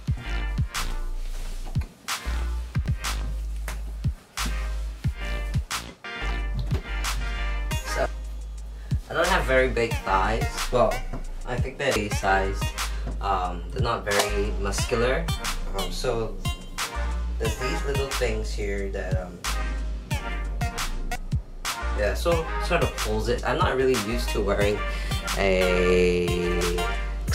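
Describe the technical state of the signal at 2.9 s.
Damaged data in the compressed stream appears at 2.86 s as a single, near-instantaneous glitch. At that point the encoded bytes feeding the decoder are corrupted, so the frame there cannot be read correctly. The decoder either misinterprets it or discards it, loses its place in the bitstream, and has to hunt for the next valid frame header before output resumes. The result is a brief chirp or blip cutting across the sound at that moment.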